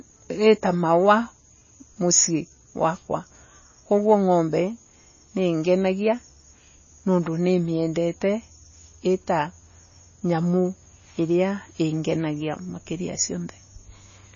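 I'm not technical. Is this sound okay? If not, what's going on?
No, it isn't quite right. All the way through, the speech sounds dull and plainly watery, with nothing above about 7 kHz, and s sounds come out swirly and metallic. That's likely MP3 compression squeezed too hard, throwing away treble and fine detail to save space.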